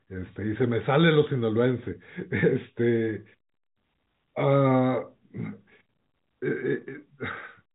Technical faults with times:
none

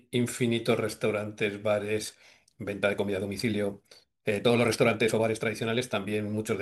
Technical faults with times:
1.98-6.62 time-stretched section

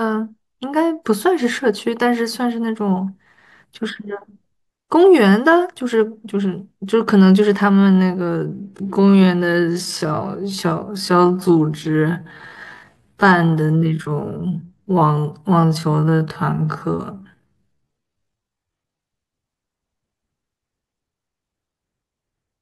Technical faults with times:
7.67-19.03 time-stretched section

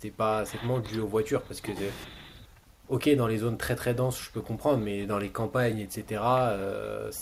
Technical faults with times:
none

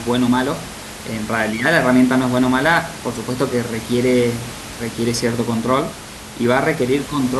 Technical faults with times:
none

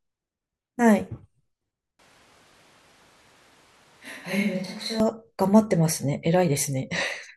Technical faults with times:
1.99-5.00 switch to a distant microphone

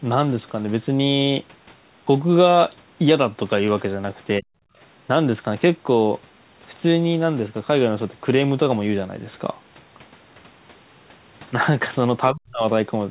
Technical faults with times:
4.39-4.53 speech suppressed in double talk
12.31-12.64 speech suppressed in double talk

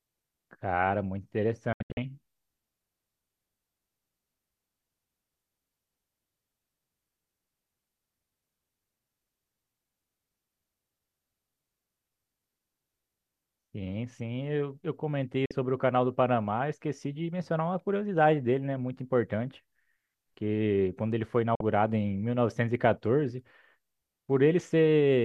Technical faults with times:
1.73-1.98 digital broadcast dropout
15.46-15.51 digital broadcast dropout
21.55-21.61 digital broadcast dropout

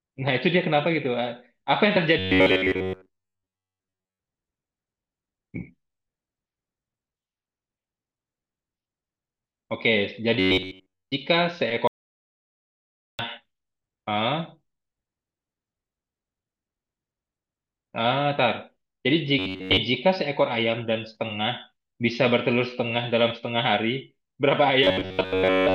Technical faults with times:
2.19-4.19 robotic sound from repeated short buffers
10.39-11.13 robotic sound from repeated short buffers
11.87-13.19 audio dropout to silence
19.39-19.77 robotic sound from repeated short buffers
24.84-25.74 robotic sound from repeated short buffers

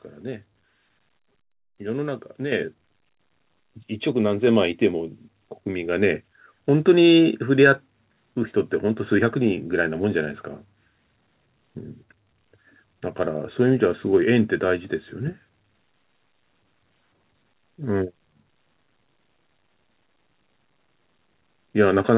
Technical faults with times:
2.52 microphone volume stepped up

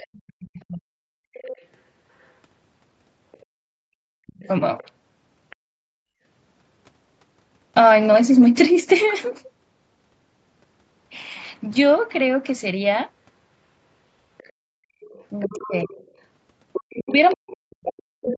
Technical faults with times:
0.00-1.15 speech suppressed in double talk
1.33-2.23 other side's voice leaking through
3.32-3.37 other side's voice leaking through
4.15-4.48 speech suppressed in double talk
4.78-5.56 other side's voice leaking through
14.38-18.38 other side's voice leaking through
15.00-15.89 speech suppressed in double talk
16.87-18.38 speech suppressed in double talk

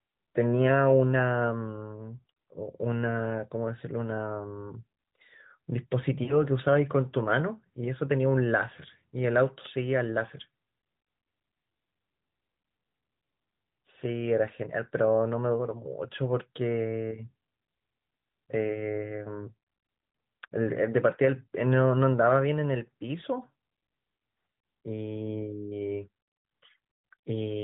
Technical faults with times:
6.24-6.41 lost AMR speech frames

